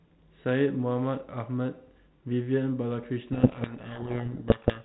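From 3.32 s to the end at 4.85 s, a codec payload misread buries the speech in harsh distortion: the G.726 code words arrive with their bit order reversed, so the decoder follows wrong differences. Unlike low-bitrate G.726 rasp, which leaves speech clear, the speech here is swamped. Before 3.32 s the telephone-band sound fits a 32 kbit/s link.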